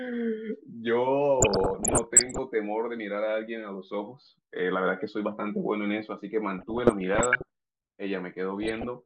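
Three patches of DAB burbling in this speech: 1.40 to 2.38 s, 6.59 to 7.42 s, and 8.63 to 8.86 s. Weak reception lets bit errors slip past error correction, corrupting sub-band levels frame by frame. You get bubbling, squelchy chirps, milder in the middle patch, where the bit error rate is about 0.4% against 1.0% elsewhere.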